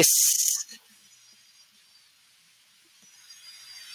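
From 0.00 to 0.06 s the opening speech carries microphone overload: peaks flatten against the converter's ceiling, roughly 5 dB past full scale, with only a small share of samples clipped. The likely cause is input gain set too high, and it adds a brief harsh crackle.

Between 0.30 and 0.54 s the chunks are out of order. A 60 ms block arrives three blocks late and plays after the material that should follow it. Nothing is missing, but the sequence jumbles, and there are three hard joins.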